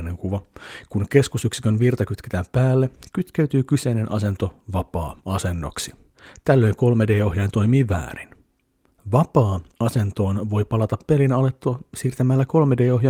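Speech recording with no audible technical faults.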